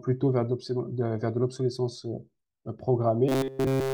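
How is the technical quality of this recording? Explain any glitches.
The recording breaks down near the end. From 3.29 s to the end at 3.93 s there is robotic sound from repeated short buffers: fresh audio likely stopped arriving in time, so the same slice of about 7.5 ms was replayed over and over in place of the real signal. That repetition stamps a fixed 134 Hz buzz onto the speech, which becomes a rigid, metallic drone, made entirely of repeats, that only loosely tracks the speech.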